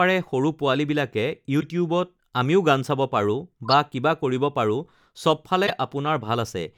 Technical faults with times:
1.60-1.63 corrupt frame decoded
3.65-3.73 corrupt frame decoded
5.67-5.70 corrupt frame decoded

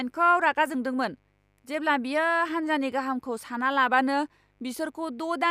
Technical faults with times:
0.00-5.51 mains buzz

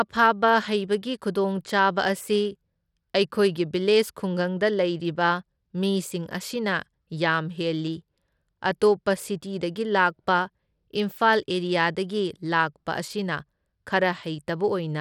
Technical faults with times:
0.00-15.01 Bluetooth SBC compression

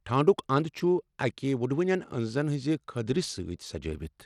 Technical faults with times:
0.00-4.26 Bluetooth SBC compression

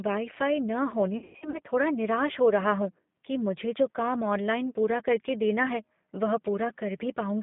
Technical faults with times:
0.00-7.42 G.729 codec
1.18-1.58 VoIP packet loss concealed by the speech codec

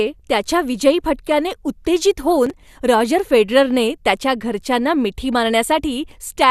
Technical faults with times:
2.46-2.69 processor overload crackle

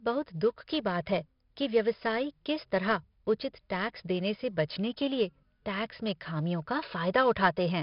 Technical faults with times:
0.00-7.82 4-bit ADPCM compression

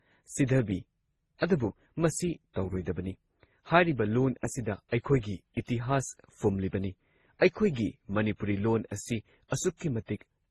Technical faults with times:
0.00-10.50 transcoding between lossy codecs

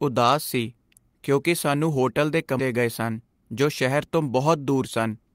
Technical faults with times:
2.59-2.67 skip ahead

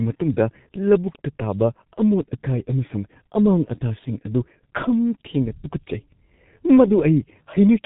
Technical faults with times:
0.00-7.85 G.723.1 codec

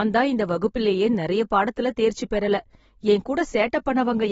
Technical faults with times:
0.00-4.31 AAC compression

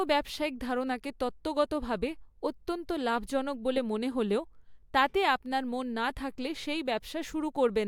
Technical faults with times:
none

